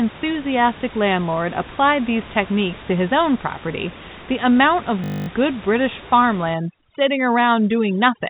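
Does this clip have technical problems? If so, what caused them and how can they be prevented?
Yes, two problems. From 5.04 to 5.28 s there's a system hang loop: the machine or audio driver stalled while the sound hardware kept replaying the same 20 ms stretch of its ring buffer, twelve times over. A loop that short repeats at 50 Hz, so instead of a stutter you hear a flat, steady buzz in place of the speech. To prevent it, keep the audio thread at real-time priority and away from blocking work so the driver never starves.

From 6.54 s to the end there's overdone noise removal. The room noise sits about 18 dB under the speech, and a noise reducer set too hard is cutting individual frequency bands whenever they drop near its noise estimate. That leaves the gaps almost silent with little twinkling specks, and the quieter parts of the voice get cut along with the noise. To prevent it, dial back the reduction amount so some natural room noise remains.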